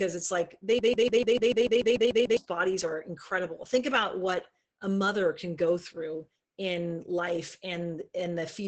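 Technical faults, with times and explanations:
Throughout: Opus voice compression. The speech is heavily damaged by low-bitrate coding, which fits about 10 kbps in the SILK linear-prediction mode. Nothing is heard above about 8.9 kHz, so the top of the band is cut away. The coder models the voice as a filter driven by a coarsely coded excitation, and that coarseness makes the speech muffled, hoarse and slightly robotic.
0.79 to 2.37 s: broken-record loop. A fragment about 147 ms long repeats exactly, back to back, eleven times. This is likely a stall in the player, encoder or stream that kept resending the last piece it held. The result is a fast, stuttering, machine-like repetition. Whatever should have played in those 1.6 seconds is lost, and the sound jumps ahead when the loop ends.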